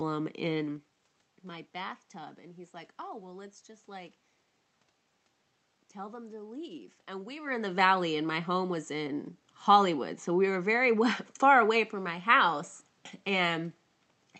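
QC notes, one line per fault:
No faults: nothing stood out on listening, with the room's background noise and the talker's changes in distance near 0.5 s and 7.5 s heard as part of the recording itself.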